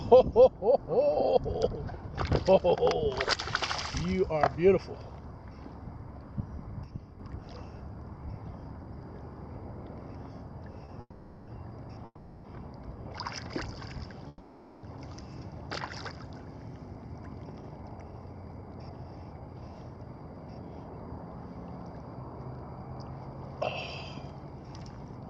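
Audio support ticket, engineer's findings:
Sudden gain jump, 6.84 to 7.20 s. Level drops about 6 dB in one step, background noise with it, then returns. No ramp. Likely a gain setting or bit shift applied without smoothing in the digital gain stage.

Short stall from a late packet, 10.85 to 10.90 s. Last sound held about 30 ms, slight buzz or dip. Jitter buffer ran empty. Receiver stretched audio until the packet arrived, then resumed at the same point. Nothing lost, delay up 30 ms.

Call audio freeze at 11.00 to 11.49 s (470 ms), 12.05 to 12.46 s (390 ms), and 14.28 to 14.85 s (550 ms). Fading buzz or hiss, then brief silence before resuming. Likely packets held up in transit, jitter buffer empty. Gaps inserted, nothing missing.

Jitter buffer slow-down, 13.09 to 13.34 s. Audio runs at 89% speed, same pitch, sounds drawn out. About 36 ms added. The receiver repeated pitch periods to rebuild its reserve after running low or raising its target delay, just before the 14.28 s freeze.

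Jitter buffer speed-up, 17.46 to 21.07 s at 115%, and 24.74 to 25.27 s at 116%. Hurried, same pitch. Roughly half a second cut, then about a tenth of a second. The buffer trimmed pitch periods to shed excess delay.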